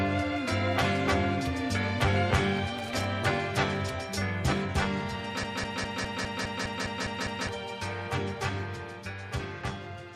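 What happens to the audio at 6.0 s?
A broken-record loop runs from 5.44 to 7.49 s: a 204 ms fragment repeats exactly ten times, likely from a stalled stream resending its last buffer.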